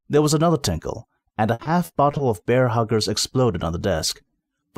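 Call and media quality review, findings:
Repeated packet loss (robotic sound), 1.53 to 2.21 s. Choppy stretch: five dropouts, longest 60 ms, 160 ms missing in total. Probably the jitter buffer/concealment in the receive path. Each hole gets patched by stretching the last bit of audio, so roughly a quarter of that span is filler rather than real sound. Worth checking network loss and late arrivals around that moment.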